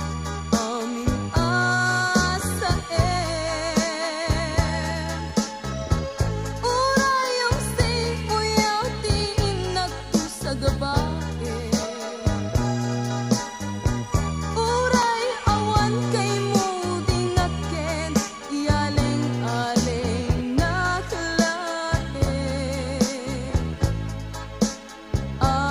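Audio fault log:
5.30 s, 9.19 s, 11.83 s, 15.03 s: four single sharp clicks, each a thin vertical line across the spectrum. Likely dropped samples, with well under a millisecond missing each time, so the waveform jumps abruptly between non-adjacent values without removing audible sound.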